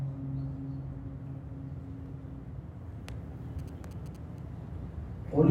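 From 3.59 to 4.39 s there are GSM signalling bursts. A nearby 2G phone is sending short groups of radio pulses, as it does while signalling. The audio circuit rectifies that radio energy into an audible signal. The pulses repeat at about 217 Hz. The result is a galloping dit-dit-dit of short buzzes. It sits roughly 25 dB below the main sound. It stops after less than a second.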